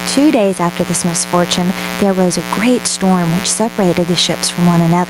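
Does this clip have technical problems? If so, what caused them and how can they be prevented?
Yes. A raspy mains buzz runs through the whole clip. It is fairly loud, around 15 dB below the speech. Sharp switching spikes twice in every 60 Hz cycle, from a dimmer, rectifier or missing shield, spread harmonics into the kilohertz range. Shielded, balanced cables and no dimmers nearby prevent it.

Gain pumping is also present throughout. The gain swings by around 10 dB, pulling loud and soft parts closer in level. The likely cause is gain set far too high, with a fast limiter clamping every peak. Lower input gain prevents it.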